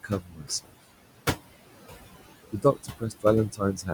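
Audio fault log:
Throughout: noise suppressor artifacts. The background pumps down in the gaps and swells back under the speech. The suppressor strips about 19 dB from bands it judges steady noise, with room noise sitting about 12 dB below speech.
0.03 to 0.75 s, 2.52 to 3.25 s and 3.52 s to the end: speech cut by the noise suppressor. Soft consonants and word endings sound swallowed, dropping as much as about 20, 18 and 15 dB, over roughly a few hundred milliseconds of each span. The suppressor mistook these quiet speech parts for noise.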